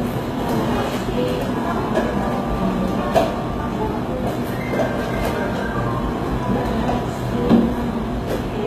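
Sounds here, with plainly audible HE-AAC compression damage all the way through, likely from HE-AAC v2 at a low bitrate around 20 kbps. The top end is rebuilt by copying lower bands upward, so the treble sounds gritty and metallic, with nothing above about 14.9 kHz.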